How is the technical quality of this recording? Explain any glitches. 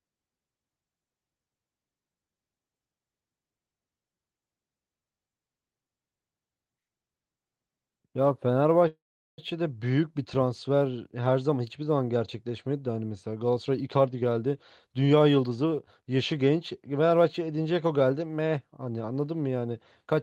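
The speech carries three faults: a constant signal-dependent roughness, one stall, and a stretch that runs fast. It reaches us over an Opus call path whose top end stops near 12 kHz.

Sample clock jitter runs throughout. The converter's clock wobbles by a couple of microseconds, so steep waveform slopes get mistimed. This creates a faint hiss, roughly 45 dB down, that grows on loud, bright sounds and disappears in pauses. Steady background noise would not track the signal this way.

A call audio freeze runs from 8.87 to 9.40 s, most likely from packets held up in transit. The last sound smears into a fading buzz and then about 0.4 s of silence. When the audio resumes, it picks up exactly where it stopped. Unlike a dropout, nothing is lost; roughly half a second is inserted.

A jitter buffer speed-up runs from 13.56 to 16.17 s. The receiver trims repeated pitch-period slices, about a third of a second in all, to reduce excess delay. 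The speech plays at 111% and sounds hurried, but its pitch is unchanged, unlike a simple resampling error.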